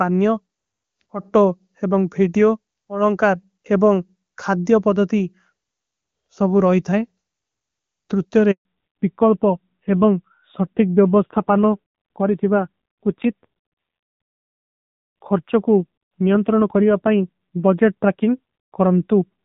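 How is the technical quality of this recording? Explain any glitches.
The call has two connected faults around 8.5 s, after which the audio stays noticeably degraded to the end.

From 8.51 to 8.65 s there is a handover gap of 140 ms. While the phone switched the call between networks, no speech frames reached the receiver, so the signal fades out within a few tens of milliseconds and stays silent until the new link takes over. Anything spoken in that window is gone.

From 8.65 s to the end, the call falls back to narrowband. Before the handover the bandwidth and clarity fit HD Voice (AMR-WB) at its top rate, with little or no codec damage. After it, the call runs on an older narrowband codec at a low rate, consistent with AMR-NB at 7.4 kbit/s, and nothing above 4 kHz survives. The sound turns duller and muffled, sibilants lose their edge, and the low-rate coding adds a rough texture.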